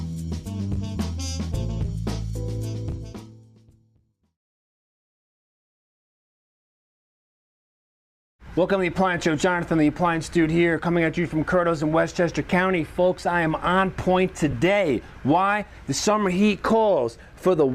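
At about 14.51 s the audio has a brief patch of lost LE Audio frames. Roughly 15 ms of the Bluetooth LE Audio stream failed to arrive, which fits two consecutive 7.5 ms LC3 frames. The decoder fills the gap by repeating the last good spectrum with randomised signs. Any tonal content therefore becomes a short noisy smear rather than a clean click or dropout. The gap is too short for the concealment to fade toward silence.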